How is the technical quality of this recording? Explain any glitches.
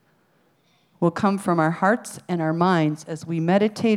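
I hear no technical problems anywhere in this recording.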